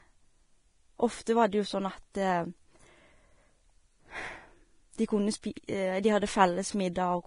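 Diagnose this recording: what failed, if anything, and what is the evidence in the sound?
The codec stage is where this fails, most likely through Vorbis compression at a low bitrate. Throughout the speech there is nothing above 10.5 kHz, and the remaining treble is grainy and hissy rather than clean. That points to heavy coarse quantisation of the residue above the spectral floor, which fits roughly 29 kbps. A plain low-pass filter would remove the top band without leaving noisy, roughened detail and blurred consonant attacks below the cut-off.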